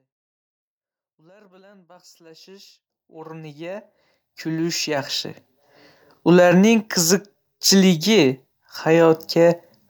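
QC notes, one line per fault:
Nothing to flag here; the speech simply eases in with a gentle fade-in that reaches full level by about 5.9 s.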